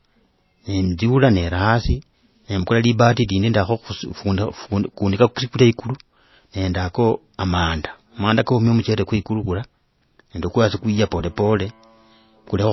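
The speech was likely encoded at a low bitrate and then re-saved at a high one, so nothing above 5.8 kHz survives and a dull, smeared low-bitrate quality persists throughout.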